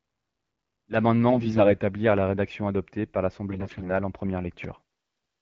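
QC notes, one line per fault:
1.30–1.71 s and 3.49–3.90 s, AMR bit errors: around a tenth of the less-protected bits flipped in the wideband (HD Voice) frames, misplacing excitation pulses and skewing pitch, gain and spectrum, so speech turns hoarse and gargly.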